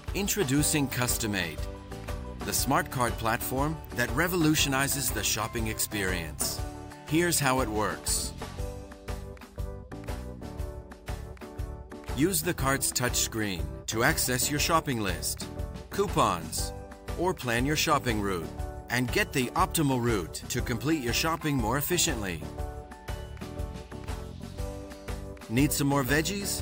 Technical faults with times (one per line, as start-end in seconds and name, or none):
none